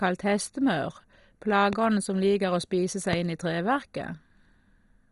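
The speech sounds dull and gurgling throughout, with a granular roughness and nothing above 11.2 kHz. This is most likely MP2 compression starved of bits, which fits a rate around 56 kbps: upper sub-bands switch off entirely and the remaining ones are coarsely quantised.

At 1.73 to 1.75 s, and again at 3.13 to 3.15 s, a single sharp loud pop jumps out well above the speech, roughly 15 dB louder, while the talking continues beneath it. Each is likely a brief electrical pulse, such as a switch, static or driver glitch, added onto the signal.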